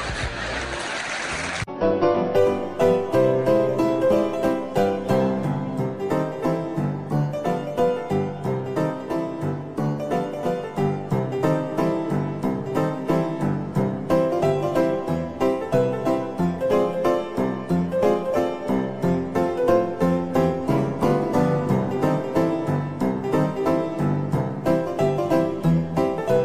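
No technical faults are audible anywhere in the recording.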